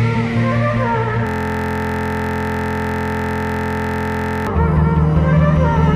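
At 1.27 s the audio locks into a system hang loop until 4.47 s: the machine stalled while the output kept replaying one 23.22 ms slice, which fits a 1024-sample buffer. Repeating over a hundred times, it comes across as a steady 43.1 Hz buzz.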